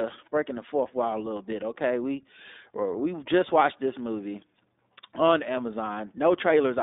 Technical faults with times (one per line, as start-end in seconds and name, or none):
0.00-6.83 iLBC codec